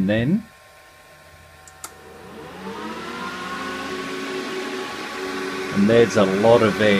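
No faults are present in this recording.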